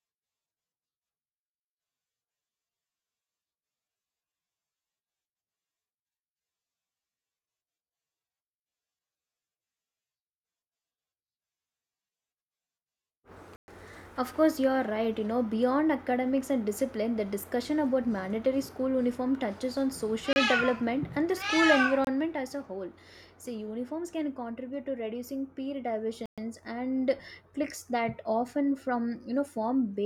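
In this speech clip, the playback path appears to have missed its deadline four times, with the output buffer not filled in time, leaving blocks of digital silence where samples were zeroed. The sound drops abruptly to nothing and returns: 120 ms holes at 13.56 s and 26.26 s, and shorter 31 ms and 26 ms gaps at 20.33 s and 22.05 s.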